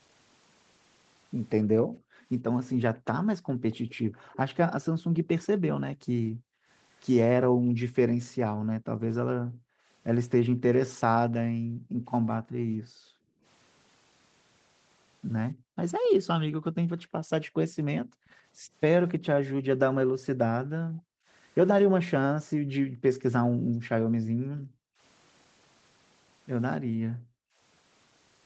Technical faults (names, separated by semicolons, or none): background gated by the echo canceller; echo leak